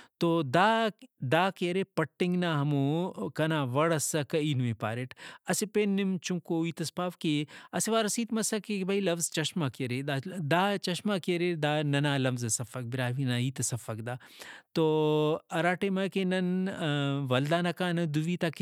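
There are no technical faults to describe in this speech recording.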